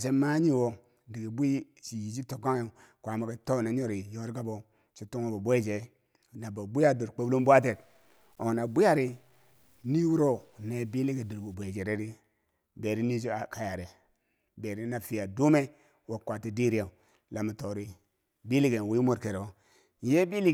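From 7.19 to 11.54 s, just after "na bo bwiya dor", the speech turns grainy with low bit depth without dither. The likely cause is samples truncated to about 10 bits with no dither, so the rounding error tracks the speech. Quiet syllables and decays sound gritty and drop out or sputter, with distortion sitting roughly 40 dB below the signal. A zoomed waveform shows stair-stepped levels in the soft passages, and a spectrogram shows harmonic grit that comes and goes with the speech.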